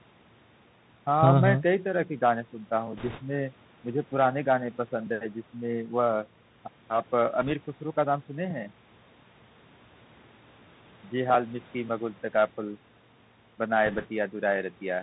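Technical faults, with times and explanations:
Throughout, Bluetooth CVSD headset codec: the speech is squeezed through a narrowband one-bit delta codec, so nothing above 4 kHz survives, s sounds go scratchy and grainy hiss sits underneath.
2.97–3.21 s, 7.41–7.52 s and 13.86–14.07 s, bit errors on a Bluetooth voice link: flipped bits add a rushing crackle, strongest in the first burst at around a few percent, but no hard clicks.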